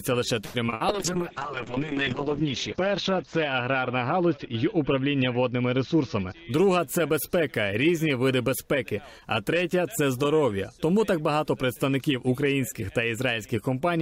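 Right at the start, from about 0.45 to 0.82 s, you get a burst of repeated packet loss with that robotic, choppy quality. There are four short holes, the longest around 89 ms, and each one gets papered over by stretching out whatever sound came just before. About half of that stretch ends up being concealment rather than real audio, so it comes across as choppy, robotic stuttering with bits missing. Right after, from about 0.89 s to 6.77 s, there's a call bitrate drop. The top end collapses from full bandwidth up to 20 kHz down to a ceiling around 8 kHz, so everything goes muffled and a bit watery. The coarseness points to the encoder being pushed from a high-quality rate down to something in the region of 6 kbps. It sits at its worst for a bit over a second before things ease back. Overlapping the tail of that, from about 5.94 to 6.79 s, there's a jitter buffer speed-up. The receiver had built up more delay than it wanted, so it trimmed short pitch-period chunks over and over, cutting roughly a tenth of a second in total. 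The sound plays at around 109% speed without the pitch shifting, so that bit feels rushed.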